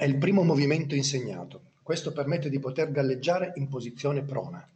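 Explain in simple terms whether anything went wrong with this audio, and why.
Nothing went wrong with this speech recording: it came through a normal internet call connection, where the Opus call codec keeps the sound up to about 8 kHz and leaves only the usual coding noise of such a connection.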